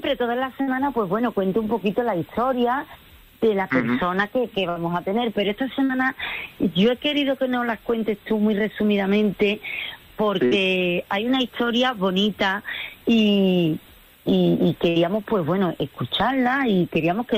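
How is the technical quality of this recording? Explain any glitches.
The recording is marred by five bursts of packet loss, at 0.61–0.70, 4.69–4.79, 5.84–5.92, 10.45–10.54 and 14.89–14.99 s. Each time, about 60 ms of audio never arrived. The receiver stretched the last sound into a fading buzz or hiss, then skipped ahead. On a spectrogram this shows as smeared, dimming bands followed by an abrupt jump.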